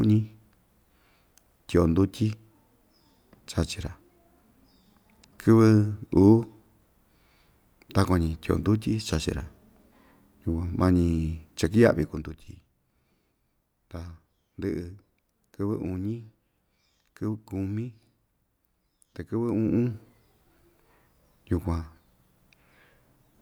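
A speech recording with no technical faults to report.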